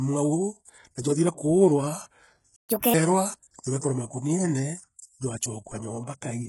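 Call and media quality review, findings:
HE-AAC compression, throughout: heavy codec damage, likely HE-AAC, consistent with a very low bitrate around 12 kbps. Replicated treble is gritty and lispy on s sounds.

Playback stall, 2.56–2.69 s: speech cuts out for about 0.12 s mid-flow. Likely buffer underrun or blocked player thread. Output silent until recovery.

Catch-up at higher speed, 2.69–2.94 s: resampled playback at 1.5× to recover lost time. Pitch rises about seven semitones, then returns to normal.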